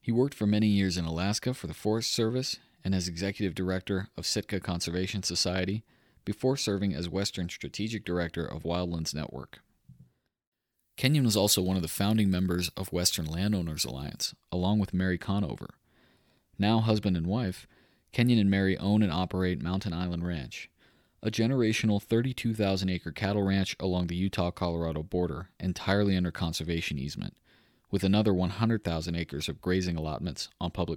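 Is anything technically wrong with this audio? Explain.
Yes. Pre-emphasis left on, from 10.44 to 14.26 s, just before "along with": the treble boost of a 50 µs FM curve was applied without the matching de-emphasis, lifting 10 kHz about 10 dB above 1 kHz. The speech turns thin, bright and sibilant.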